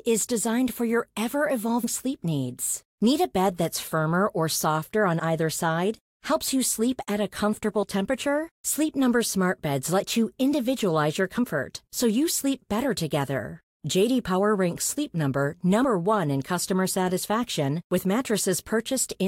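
At 1.83, 5.19 and 7.83 s the speech jumps ahead, skipping roughly a tenth of a second, then about 50 ms, then about 20 ms. These are compressed frames skipped, not dropouts: no silence fills the gap.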